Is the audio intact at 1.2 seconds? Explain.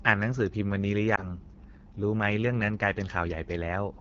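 No. Lost AMR speech frames disturb the audio from 1.16 to 1.28 s. A burst of radio errors corrupted what sounds like a single 20 ms frame, so it failed its checksum. The decoder then reused the previous frame's pitch and vocal tract settings at reduced gain instead of the missing data. The result is a brief dip or warble in the speech, and the sound returns weak or rough for a moment.

The moment also carries AMR wideband (HD Voice) codec damage, which runs through the whole clip. At 8.85 kbit/s, one of the codec's two lowest rates, the pulse-driven vocal tract model has too few bits to model the speech accurately. That leaves a plainly audible rough, raspy texture on the voice. The top band, 6.4 to 7 kHz, holds only shaped noise.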